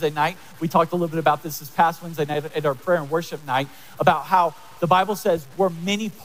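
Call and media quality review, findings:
Low bit depth without dither, throughout. Grainy distortion follows the sound; quiet passages turn gritty. Likely 8-bit truncation in conversion, error about 30 dB below signal. Unlike steady hiss or dither, the grit tracks the signal.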